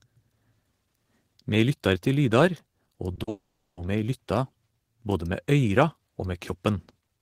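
Short concealed packet loss hits at 3.15 to 3.19 s and 3.23 to 3.29 s: 20 and 40 ms went missing, and the receiver extended the preceding sound, leaving brief smeared wobbles. A long network dropout, likely a network outage, follows from 3.29 to 3.79 s: a fading continuation gives way to about 0.38 s of silence before the audio resumes at "me lytta".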